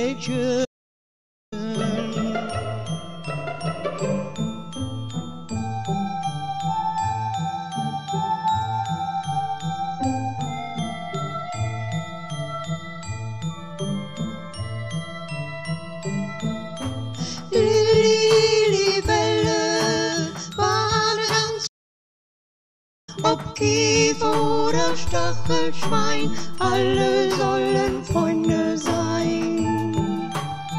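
The audio cuts to silence from 0.64 to 1.53 s and again from 21.66 to 23.09 s, then resumes: playback stalls, likely from the player starving for data or blocking.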